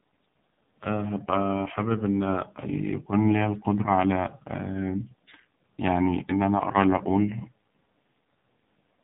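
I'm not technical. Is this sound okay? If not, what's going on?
No. The whole speech clip has gone through an AMR narrowband mobile codec, an old phone-call format. It strips everything above 4 kHz and rebuilds the voice from a rough model, leaving it muffled, buzzy and synthetic throughout.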